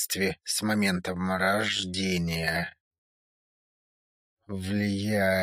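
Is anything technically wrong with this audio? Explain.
Yes. From 1.09 s to the end at 5.42 s there is a time-stretched section, slowed to about 0.54 times normal speed while the pitch is held. This is likely done by stretching software that repeats short pieces of the audio to lengthen it, so the pace drops abruptly and the sound drags.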